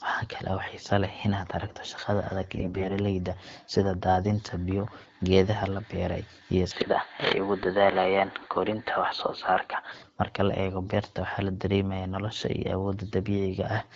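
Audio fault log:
2.57–2.92 s, AMR bit errors: right after "shaqada adag" the speech turns hoarse, scratchy and gargly for about a third of a second while pitch and loudness hold. Heavy bit damage, roughly 15 percent, scrambled the excitation pulses and fine gain and spectral values across 17 frames, which fits a stretch of roughly 20 ms frames that still passed the checksum.
6.71–9.92 s, input switched to a poorer device: after "beeray iyo" the sound goes dull and boxy, nothing above 4.5 kHz, level shifting by a few decibels and a faint new noise floor far below the speech, with no gap at the switch. Likely a change to a narrower-band microphone or headset profile, clearing again near 9.9 s.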